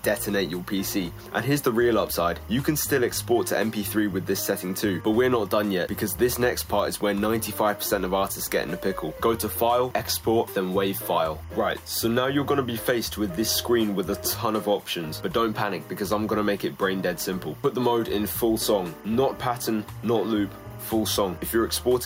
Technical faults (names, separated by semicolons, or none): timecode bleed